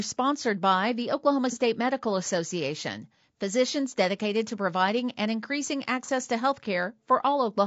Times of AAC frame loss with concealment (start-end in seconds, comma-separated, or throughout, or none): 1.52-1.57, 6.05-6.09